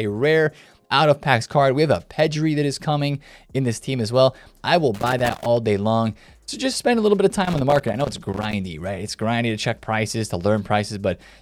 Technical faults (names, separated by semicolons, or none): loose connector crackle